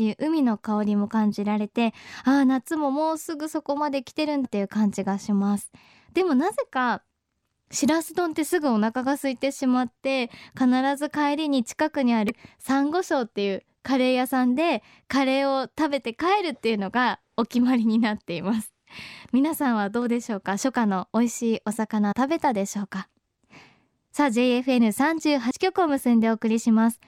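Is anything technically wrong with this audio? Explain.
Yes. The clip has damaged data in a compressed stream, occurring five times: 4.44 to 4.46 s, 9.17 s, 12.29 to 12.31 s, 22.11 to 22.13 s, and 25.50 s. At each point, bytes in the encoded speech stream were corrupted, so the decoder misread those frames, lost sync, and had to hunt for the next valid frame header. Each event lasts no more than about 20 ms and is heard as a brief chirp or blip that cuts into the speech.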